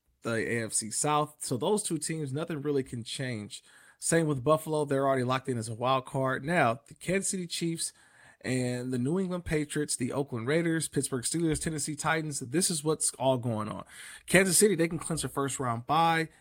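Listening to the speech in this recording, nothing stood out as a technical problem at any point.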